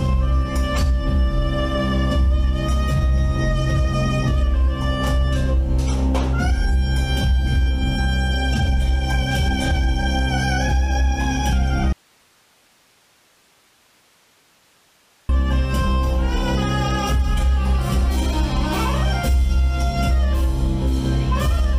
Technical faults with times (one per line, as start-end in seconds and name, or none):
11.93-15.29 audio dropout to a faint residue